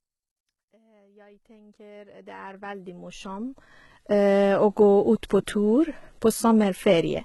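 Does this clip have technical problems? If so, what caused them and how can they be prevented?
Yes. The whole clip has that HE-AAC compression sound. The top end is still bright, but it's synthetic. The treble has been rebuilt by copying lower bands upward, so the harmonics up there don't line up with the ones below, and the s sounds come out gritty and a bit lispy. The damage is heavy, which points to a very low bitrate, something like 16 kbps. The slow fade-in up to about 4.35 s carries the same texture. To prevent it, encode at a much higher bitrate or use a codec mode that doesn't rely on band replication.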